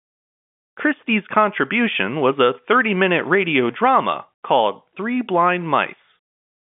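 No technical faults turn up in this speech recording, which carries the narrow, band-limited sound of ordinary G.711 telephone coding, with its content held between about 150 Hz and 3.5 kHz as a normal phone line passes it.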